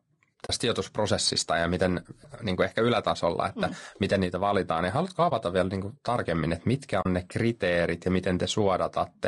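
Throughout, the speech sounds rough and grainy, with noise between its harmonics. This is likely low-delay AAC compression, with short frames starved of bits near 32 kbps. At 0.45 to 0.50 s, 5.29 to 5.32 s and 7.01 to 7.06 s, there is AAC frame loss with muting. Missing frames were zeroed, leaving a brief dip and soft-edged silent holes of 20 to 40 ms.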